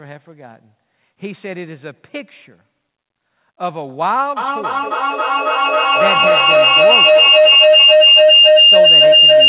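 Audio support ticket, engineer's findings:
Feedback howl from 4.37 s to the end. Tone around 3 kHz, repeating roughly every 300 ms, peaking about 12 dB over the speech. Likely two devices sharing one room, loop gain above unity. Muting one kills it.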